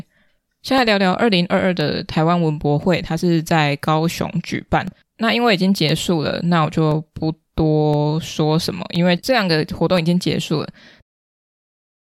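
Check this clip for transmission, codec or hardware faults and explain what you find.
One hardware fault is present. Periodic USB or driver dropouts run from 0.78 to 12.02 s, about every 1.02 s: a blocked bus or driver drops roughly a millisecond of audio, replaced by silence, giving regular ticks through the speech and into the smooth fade-out ending at 11.03 s.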